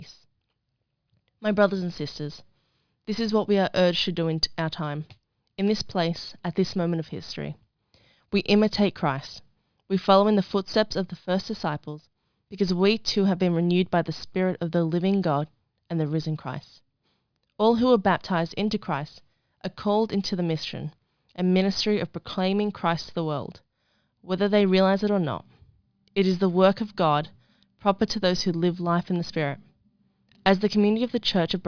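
Nothing in the speech recording points to a technical fault at any point in the audio.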